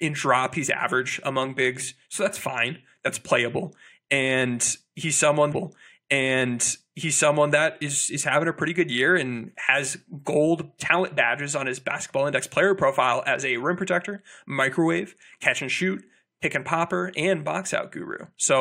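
A stream segment was repeated in this speech clip: the player fetched or queued the same stretch of programme twice, so from 5.52 s to 7.51 s about 2.0 s of speech plays again, with a small blip where playback jumps back.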